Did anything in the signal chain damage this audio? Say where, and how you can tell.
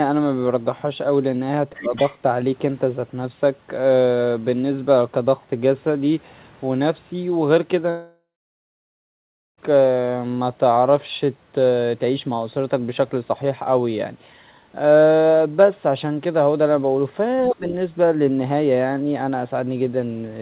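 Yes. There is speech suppressed in double talk, at 1.72 to 1.93 s and again at 17.50 to 17.64 s. This is call processing. The talker dips by about 15 dB in the first spot and about 25 dB in the second, for roughly two tenths of a second the first time and about 0.15 s the second. The likely cause is the echo canceller turning everything down while both sides spoke. A network loss would remove the audio outright, but here the level sags and then recovers.

The other side's voice leaks through in the same two places, at 1.78 to 2.17 s and 17.48 to 17.56 s. It sits about 20 dB below the talker. This is also call processing: the loudspeaker sound likely got past the echo canceller into the microphone. Unlike crosstalk in analogue wiring, it shows up only in these brief scraps, right where the double-talk suppression occurs, rather than as a steady bleed.

A long network dropout runs from 7.90 to 9.59 s and loses about 1.7 s of audio. 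For roughly a third of a second the receiver extends the last sound as a fading buzz. Then about 1.3 s of silence follows before the audio resumes, with the lost part never played. The concealment tail followed by a clean jump likely points to packets that never arrived, not a buffer underrun in a driver. Throughout the clip, nothing is present above 4 kHz, which fits the 64 kbps G.711 call codec.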